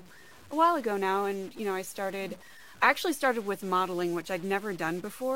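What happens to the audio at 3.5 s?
At 3.5 s the speech carries a grainy noise, and in any gap between sounds a hiss of noise sits where there should be silence. This is present from start to finish, not just at this moment. The likely cause is a stuck bit: one bit of each sample is held fixed, so about half the values are pushed off by a step of about -50 dBFS, roughened along the waveform and flipping around zero in quiet stretches.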